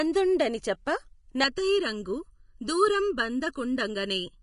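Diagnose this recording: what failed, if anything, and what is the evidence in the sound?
Codec stage: grainy, hissy treble throughout with nothing above 10.6 kHz, likely Vorbis compression near 31 kbps. Unlike a plain low-pass, the remaining top is noisy.

Wiring or mixdown stage: from 1.44 s to the end, hollow, phasey channel delay (comb filtering). One channel lags under a millisecond, and mono summing cancels evenly spaced frequencies from around 700 Hz, fixed rather than grainy.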